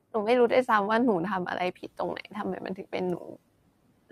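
Between 1.75 and 3.37 s the noise suppressor cuts speech four times (1.75, 2.22, 2.6, 3.17 s), mistaking quiet parts for noise, lowering them by about 10 to 15 dB. Unlike dropouts, the sound thins and swallows rather than vanishing.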